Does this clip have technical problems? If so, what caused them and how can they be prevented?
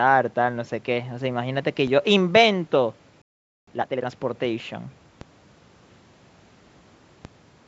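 Yes. DC steps occur at 1.87, 5.21 and 7.25 s. Each time, the waveform's zero line jumps, giving a low thump. A 5 Hz high-pass then lets the offset decay. Preventing this means avoiding converter recalibration or offset inputs being switched mid-stream, and high-passing the input early.

A playback stall silences the speech from 3.22 to 3.67 s, a gap of about 0.46 s. The player was likely starved of data or blocked. A larger playback buffer and a player thread that is never blocked would prevent it.

Time-compressed catch-up follows from 3.67 to 4.11 s. The player runs the backlog at 2x speed by cutting and cross-fading small pieces, so the speech rushes at normal pitch. Fixing the stall removes the backlog, and a gentler catch-up rate keeps any remaining recovery less audible.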